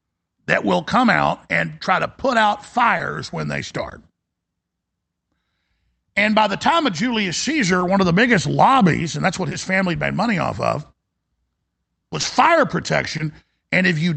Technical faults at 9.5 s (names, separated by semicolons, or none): short concealed packet loss